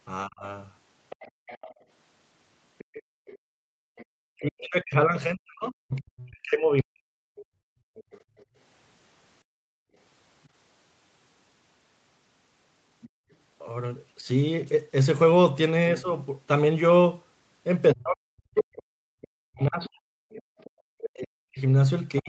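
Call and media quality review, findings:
Speech suppressed in double talk, 0.25 to 0.45 s. Talker dips about 30 dB for roughly 0.2 s. Likely echo canceller misreading overlap as echo. Second event, 4.35 to 7.31 s. Dips about 40 dB over roughly 3 s. Third, 14.21 s to end. Up to about 40 dB down. Same mechanism.

Other side's voice leaking through, 1.1 to 13.35 s and 18.58 to 22.22 s. Second voice audible about 25 dB under the talker. Likely residual loudspeaker echo the canceller did not fully subtract. Talker band tops out at 8 kHz, consistent with the wideband Opus call path.

Background gated by the echo canceller, three events. 1.31 to 4.07 s, room sound drops about 35 dB for roughly 1 s in total. 7.59 to 9.96 s, about 37 dB, roughly 1 s in total. 13.09 to 13.31 s, about 33 dB, 0.2 s. Canceller clamps the microphone while the loudspeaker plays. Room sound returns on release.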